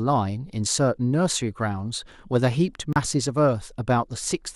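A digital broadcast dropout at 2.93 s mutes the speech for about 32 ms, consistent with one failed frame, before the receiver resumes with the programme already moved on.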